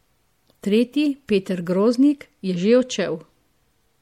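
Throughout the speech there is plainly audible coding damage, with a watery top end and smeared consonant onsets. The likely cause is MP3 compression at a bitrate around 64 kbps, where the encoder drops treble and weak frequency content to save bits.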